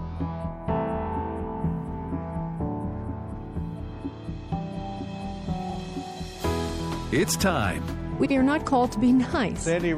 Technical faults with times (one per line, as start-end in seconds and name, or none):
0.00-9.98 MP3 compression
5.69-5.75 frames out of order
8.20-8.31 frames out of order